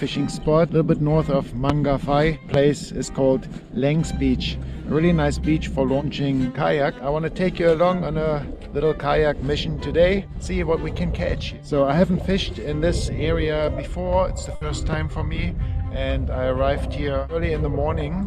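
A sudden voltage step or pulse, most likely from a plug, a switch, static or a driver glitch, enters the signal at 1.69 to 1.72 s and again at 2.54 to 2.57 s. Each is a single loud pop, a sharp thump lasting a few hundredths of a second, peaking far above the surrounding audio: roughly 20 dB higher the first time, somewhat less the second. The sound carries on underneath both.

From 14.55 to 14.63 s a burst of packet loss leaves a gap in the stream. The receiver fills the first 60 ms by extending the last sound it had while fading it down, which comes across as a brief held, dwindling tone or hiss. When playback resumes, another 60 ms of audio is simply gone, so the sound jumps ahead.

Shortly after, at 14.93 to 14.95 s, a third loud pop of the same kind lands, roughly 10 dB above the surrounding audio, milder than the first two.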